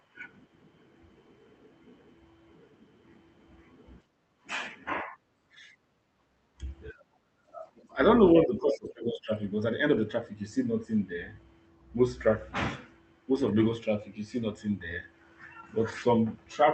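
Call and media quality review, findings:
Background gated by the echo canceller, 4.04–4.43 s and 5.43–5.51 s: room tone drops about 20 dB, then about 14 dB, and recovers within a fraction of a second. The echo canceller clamps mic gain during far-end playback.

Speech suppressed in double talk, 5.03–5.15 s, 5.79–6.61 s, 6.92–7.97 s and 8.39–9.41 s: the talker's voice dips in pieces, about 10 dB at first, then as deep as about 35 dB. The likely cause is the echo canceller treating near-end talk as echo while both sides speak, which attenuates the voice itself, not just the room.

Other side's voice leaking through, 7.77–7.85 s: a brief, faint scrap of a second voice, about 35 dB below the talker. This is likely residual echo the canceller left in the mic signal. Here something is added rather than removed, which separates it from the suppression faults. The call path runs through Opus, band-limited near 8 kHz.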